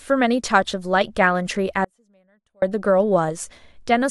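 The signal path likely lost its feed at 1.85 s while the chain after the break stayed live, so for 775 ms, until 2.62 s, this speech cuts abruptly to a faint residue some 35 dB below normal, an audio dropout rather than a pause or fade.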